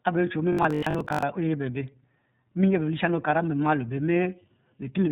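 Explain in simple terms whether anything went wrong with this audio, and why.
Two things went wrong. The whole recording passed through the iLBC codec, a telephone-grade voice compressor that squeezes speech in short chunks and throws away everything above about 4 kHz. That leaves the speech muffled, slightly rough and synthetic-sounding from start to finish.

From 0.53 to 1.23 s there is robotic sound from repeated short buffers. Audio was likely arriving too slowly, so the software kept replaying the last tiny slice, about half the time, to fill gaps. That stamps a rigid 50 Hz metallic buzz on the speech, which fits a 20 ms buffer.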